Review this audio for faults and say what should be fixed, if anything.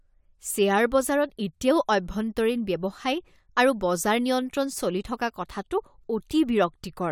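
No faults heard; nothing in this audio needs fixing.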